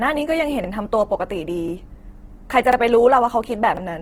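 Opus compression runs through the whole speech clip: tones come out rough, grainy and noisy rather than swirling, while the band stays full, reaching about 20.3 kHz. This is likely Opus in its music (CELT) mode at a low rate, consistent with about 16 kbps, filling starved bands with folded or noise content.

Overlapping chunks occur at 0.64–0.68 s, 2.73–2.77 s and 3.77–3.82 s, each a brief stutter where 44 ms plays twice. The audio was handled in chunks of roughly one second, and each new chunk began before the previous one finished, duplicating the seam.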